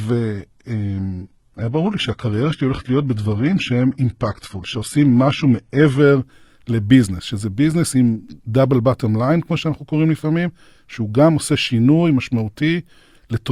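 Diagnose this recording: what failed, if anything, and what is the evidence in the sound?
The failure is at the streaming and codec stage: an adaptive stream starting at a low bitrate. From 0 to 6.0 s the speech is thin and smeared, with synthetic-sounding treble and nothing above 11.8 kHz. This fits an HE-AAC stream around 16 kbit/s rebuilding its highs by band replication. At 6.0 s the player switches to a higher rendition, consistent with AAC-LC near 96 kbit/s, and clarity jumps with no gap. On a spectrogram the top band is blurred and hard-capped, then fills in abruptly.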